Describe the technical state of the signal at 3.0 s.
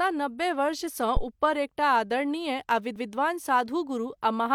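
At 2.96 s, just before the asked moment, there is a CD skip: the laser jumps to another turn of the disc's spiral, so a tiny mute of roughly two milliseconds and a tick precede speech resuming from elsewhere, appearing as a thin vertical broadband line with mismatched waveform either side.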